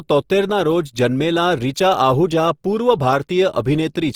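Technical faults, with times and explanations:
Throughout: Opus compression. The speech has a rough, grainy texture, and its tonal parts turn noisy instead of staying clean. There are no obvious spectral holes or swirling. Band energy seems held while fine detail is filled in with noise or folded from lower bands. Content reaches up to about 20.3 kHz, so the bandwidth has not narrowed. The likely cause is Opus in its music mode at a low bitrate, consistent with roughly 24 kbps.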